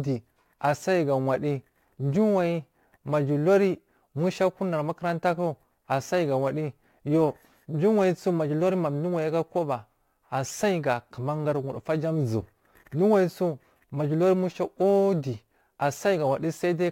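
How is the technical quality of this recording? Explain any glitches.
The recording is marred by a crude rate conversion that runs through the whole speech clip. A gritty, inharmonic fizz follows the louder and brighter parts of the voice, sitting roughly 35 dB below the speech. It fits a conversion from 48 kHz to 44.1 kHz done by dropping or repeating samples without filtering, so the error recurs in a fixed pattern and creates shifted, unrelated copies of the voice.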